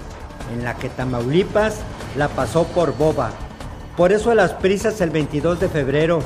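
No technical faults can be heard anywhere in this audio.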